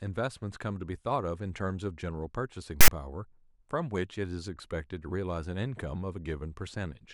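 File tags played as audio at 2.81 to 2.88 s: a 72 ms block of text tag data is read as samples, giving a loud, lopsided rasp with abrupt edges.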